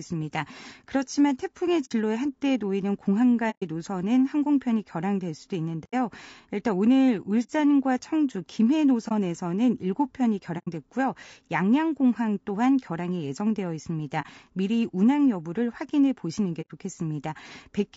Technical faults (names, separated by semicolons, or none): low-delay AAC compression; AAC frame loss with muting